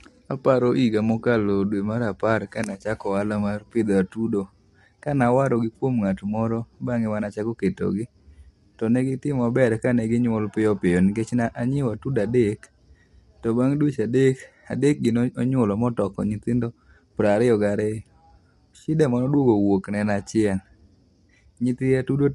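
From start to finish the speech carries plainly audible coding damage. The voice sounds rough and grainy. Nothing is present above 11.6 kHz, so the top of the spectrum is simply missing. The likely cause is low-delay AAC compression of the AAC-ELD kind used for video calls. Its very short frames resolve pitch harmonics poorly and spend bits fast. The degree of damage fits a low bitrate of around 32 kbps.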